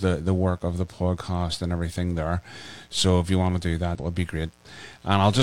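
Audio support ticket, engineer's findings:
Mains buzz, whole clip: steady raspy buzz on 60 Hz, sitting well below the speech. Harmonics reach several kHz, pointing to switching spikes from a dimmer, rectifier or unshielded run. Not plain hum, which stays a smooth low tone.

Damaged data in the compressed stream, 3.95 to 4.00 s, after "you want to do", before "would be": 50 ms glitch. Decoder lost sync on corrupt frames. A one-off event, unlike a dropout's silence or a buffer glitch's regular clicks.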